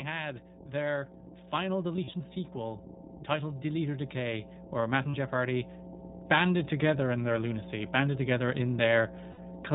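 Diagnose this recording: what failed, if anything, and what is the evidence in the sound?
A steady 60 Hz mains hum runs through the whole recording, so the fault sits in the analogue wiring, most plausibly a ground loop or a nearby transformer coupling the power line into the signal path. It is loud, only a little below the speech itself, and its pitch stays fixed whether or not anyone is talking. That constancy separates it from acoustic room noise or handling rumble, which would shift, and the 60 Hz fundamental points to a North American style supply.

The codec stage has plainly audible damage. Nothing passes above 4 kHz, and the speech has the slightly rough, synthetic edge of the iLBC codec, which rebuilds each frame's excitation on its own. The texture fits its 20 ms frame, 15.2 kbps mode. A simple low-pass filter would dull the sound without this coded graininess, and that graininess is what marks this as codec damage rather than bandwidth limiting alone.

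Lost iLBC frames show up three times in the network path. From 1.96 to 2.21 s, about 100 ms of audio goes missing in short bursts scattered over roughly a quarter second, the longest near 40 ms. A 40 ms gap follows at 5.11 to 5.16 s, and a 60 ms gap at 9.32 to 9.40 s. Each gap is filled with a held, faintly buzzy vowel rather than silence, and normal speech returns almost at once. That concealment is what separates packet loss from a hard dropout.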